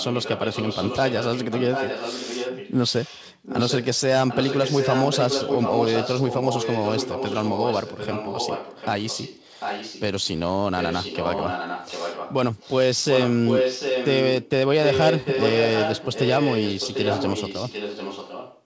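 Echo leak trails the speech by about 0.75 s at 0–4.01, 4.27–10.02, 10.22–10.4, 10.78–12.34, 12.59–12.76, 13.03–14.5 and 14.83–18.62 s. It's fairly loud, nearly equal around 13–14.5 s, with faint short scraps. Likely a speakerphone's echo canceller letting it through.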